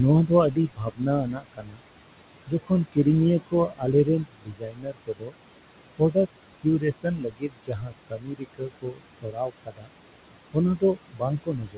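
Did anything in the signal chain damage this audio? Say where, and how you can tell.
Yes. Noise suppressor artifacts run through the whole clip and come from the call-processing stage. The room noise, about 14 dB below the speech, drops by about 21 dB between phrases and swells back beneath them. The suppressor gates bands frame by frame.

Speech cut by the noise suppressor occurs at 0.26–1.82 s, 2.46–3.06 s, 3.4–5.35 s, 5.95–6.27 s, 6.63–9.9 s and from 10.53 s to the end. The suppressor mistook quieter parts of the speech for noise and pulled them down by about 20 to 22 dB, so soft consonants and word endings sound swallowed or faint.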